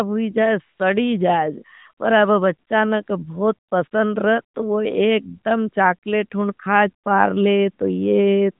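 The phone's voice activity detector briefly judged the talker silent in this speech clip, sent no speech frames, and the receiver synthesised AMR comfort noise in their place at 0.78–0.80 s, 3.68–3.72 s and 3.88–3.92 s. Each 20 to 40 ms gap swaps the real sound for smooth, steady noise that switches abruptly in and out. Throughout, the band stops at 4 kHz with light AMR narrowband coloration, which fits the 12.2 kbps mode.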